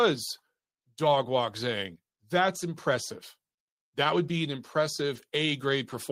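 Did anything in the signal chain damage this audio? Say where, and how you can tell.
Yes: a lost packet rebuilt from error correction, at 1.03–1.05 s and 5.15–5.21 s. The network dropped packets, likely one then two, and the Opus decoder played low-bitrate copies carried in the following packets, so there is no gap, only briefly rougher, noisier speech.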